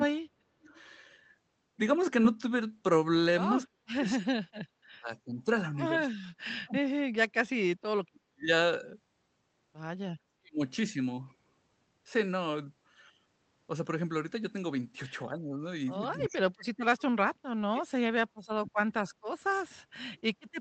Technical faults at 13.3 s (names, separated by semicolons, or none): none